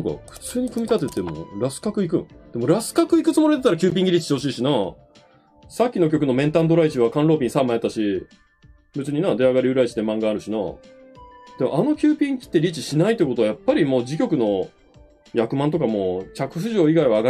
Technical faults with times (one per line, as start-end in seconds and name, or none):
3.90 gap between stream segments